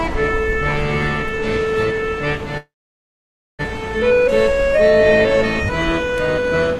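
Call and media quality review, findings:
Sound halts at 2.57 s with a short fading tail, then 0.91 s of silence, resuming at 3.61 s with nothing lost. Call audio freeze, likely jitter buffer underrun from delayed packets, adding 1.01 s of delay.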